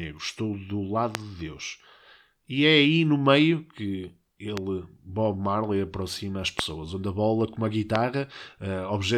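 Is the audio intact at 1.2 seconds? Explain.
No. A loud pop at 1.15 to 1.17 s, roughly 20 dB above the speech, is likely a voltage pulse from a switch or static, heard as a sharp thump over it.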